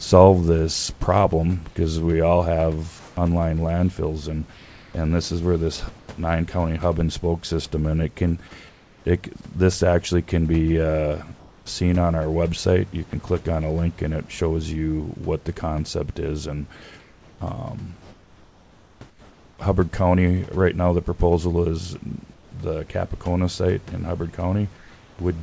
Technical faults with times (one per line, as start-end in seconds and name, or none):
2.99-6.08 comfort noise in place of the background
8.69-9.05 comfort noise in place of the background
11.39-13.13 comfort noise in place of the background
13.10-13.13 sound dropped by the voice detector
17.00-19.58 comfort noise in place of the background
22.34-22.52 comfort noise in place of the background
24.77-25.19 comfort noise in place of the background